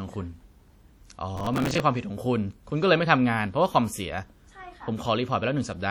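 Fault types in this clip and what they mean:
WMA compression: Ringing, washy smearing and a hiss that breathes with the speech run throughout, likely from low-bitrate WMA encoding around 48 kbps.
Processor overload crackle: From 1.36 to 1.8 s, gritty crackle tears the speech as dozens of missed buffers, each a few milliseconds, replay snippets of old audio.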